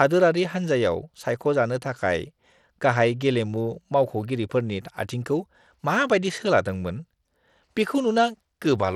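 From start to finish the speech carries a gritty, grainy texture, with the treble thinning out and flickering in and out rather than staying steady. This is likely Bluetooth SBC compression, at a low bit budget consistent with about 96 kbps: the codec splits the audio into a few broad sub-bands and starves the weak upper ones of bits. On a spectrogram the high band appears as patchy, blocky holes with smeared noise between harmonics.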